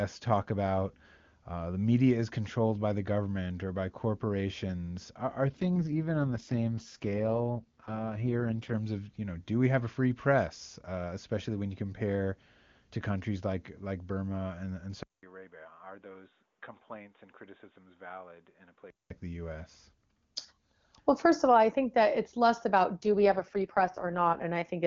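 Speech carried over AMR-WB (HD Voice) shows two AMR rate drops, at 5.5 to 8.74 s and 22.95 to 24.42 s. The bandwidth stays put and nothing drops out, but the voice turns rough and synthetic. That fits the network forcing the codec down from its 23.85 kbit/s mode to 6.6 kbit/s on a weak link, then restoring it. From 15.03 to 19.10 s, after a 0.2 s silence, the sound goes dull, drops about 10 dB, cuts off above 3.8 kHz and gains a new low noise floor, likely from the input switching to a poorer device.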